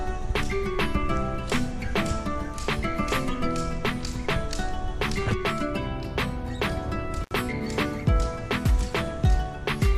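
At 7.23 s the sound drops out abruptly for about 66 ms, with a crackle at each edge and only faint hiss in the gap until it returns at 7.31 s. This is an intermittent contact: a loose cable or plug briefly opened the signal path.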